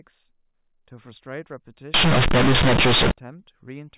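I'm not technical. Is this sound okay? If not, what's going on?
No. From about 1.94 to 3.11 seconds, the system makes a decoding mistake called companded audio read as linear. The speech is stored in the telephone A-law format, which squeezes sound into a compact form that must be unpacked before playback. Here it is played without that unpacking. As a result, quiet parts come out as loud as loud parts and the shape of the sound is bent, so that stretch turns into a harsh, very loud buzz with heavy noise in the pauses.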